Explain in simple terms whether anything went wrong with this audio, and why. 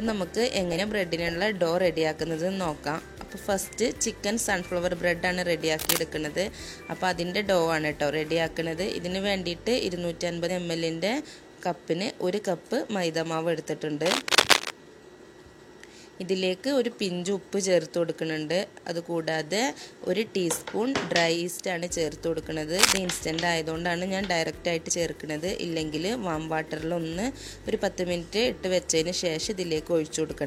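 Compressed frames skipped at 0.75, 10.45 and 24.85 s: about 50 ms of audio vanishes each time, consistent with one lost 46 ms frame.

Cable scratch noise at 5.79–5.99, 14.05–14.72 and 22.77–22.98 s: rough rustling bursts as loud as or louder than the sound itself, likely from a worn cable or connector being moved.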